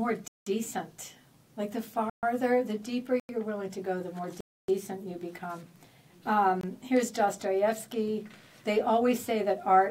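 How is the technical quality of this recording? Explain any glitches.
The recording has five dropouts to digital silence, at 0.28 to 0.46 s, 2.10 to 2.23 s, 3.20 to 3.29 s, 4.41 to 4.68 s and 6.61 to 6.63 s. These are blocks of digital silence, where a run of samples was zeroed, likely because the output buffer was not filled in time. The 186 ms and 93 ms gaps fit 8192- and 4096-sample blocks. With no fade, the sound cuts out and back abruptly. The gaps are heard as short holes.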